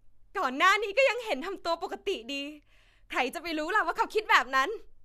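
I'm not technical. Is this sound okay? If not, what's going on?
Yes, nothing in this recording points to a technical problem with how the sound was captured or carried.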